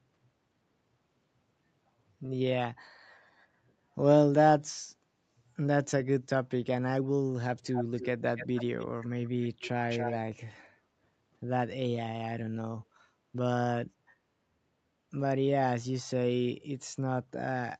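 Echo leak in this speech recording at 7.72–8.06, 8.36–8.86, 9.89–10.18 and 10.63–10.70 s: a copy of the voice returns about 281 ms late, from loud to barely audible, likely from a loudspeaker's echo canceller letting it through.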